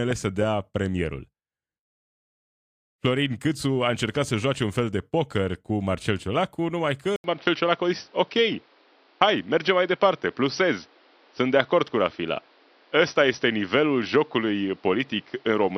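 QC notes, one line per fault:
7.16 s to end: input switched to a poorer device. An 80 ms silence marks the change. Then the speech turns dull and boxy, with nothing above 5.8 kHz. Level shifts about 5 dB. A new noise floor sits roughly 35 dB down. The recording likely moved to another microphone.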